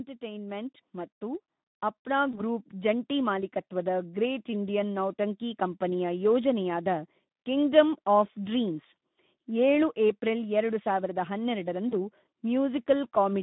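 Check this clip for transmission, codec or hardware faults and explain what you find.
Three kinds of fault can be heard: a constant low-rate Speex codec coding, two gain swells near the start, and two brief packet-loss gaps.

Speex codec, throughout: the speech is confined to a 150 Hz to 3.7 kHz band. The coding damage is plainly audible, and the degree of it points to a rate of around 11 kbps. At that rate the CELP coder has too few bits to model the excitation faithfully, so the voice comes out hoarse and grainy, with a noisy roughness. The low cut from the call microphone processing sits under this and is normal.

Automatic gain rising, from 0.19 to 1.51 s and again from 2.04 to 3.11 s: the gain control judged the input too quiet and raised its gain step by step. It adds about 5 dB in the first rise and about 3 dB in the second. Voice and background swell together over roughly a second each time, and the second swell ends just before "ಮಾಲೀಕತ್ವದ ಗ್ರೇಟ್ ಇಂಡಿಯನ್ ನೌಟಂಕಿ".

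VoIP packet loss concealed by the speech codec, at 2.31 to 2.41 s and 11.89 to 11.94 s: each gap fits a single lost 20 ms frame. The decoder filled the gap by extrapolating from its last pitch and filter settings while lowering the level. This produces a short patch of stretched, fading sound in place of clean speech. Because each decoded frame builds on the one before, the distortion lingers past the missing 20 ms, which is why the affected stretches run longer than the loss itself.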